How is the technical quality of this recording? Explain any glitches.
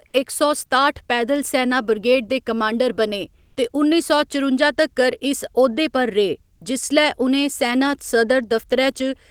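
There is one glitch: a brief stretch of comfort noise in place of the background, from 3.45 to 3.55 s. For those 100 ms the natural background, sitting about 41 dB below the loudest passages, gives way to a smooth, featureless hiss at nearly the same level, within about 1 dB. The likely cause is discontinuous transmission, as in Opus DTX: the sender stops sending during a pause and the receiver fills the gap with synthetic noise roughly matched to the background.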